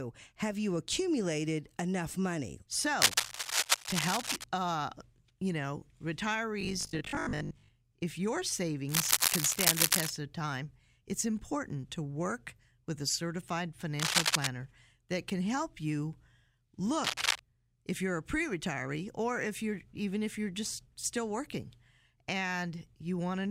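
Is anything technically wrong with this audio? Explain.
Yes, there are two kinds of trouble. Cable scratch noise shows up at 3.01–4.44 s (after "you accumulated enough money", before "uh you know"), 8.89–10.10 s, 13.99–14.47 s (after "work with a certified") and 17.04–17.40 s (before "if you're a"). Dense, ragged rustling sits over the speech, roughly as loud as it or a bit louder. That's likely a worn cable or connector being moved, with its contact resistance jumping around.

From 6.61 to 7.75 s there's robotic sound from repeated short buffers. The speech becomes a stiff, metallic 50 Hz buzz that still loosely tracks the speech. The likely cause is audio arriving too slowly, so about half the time gets filled by looping the last chunk, which fits a 20 ms buffer.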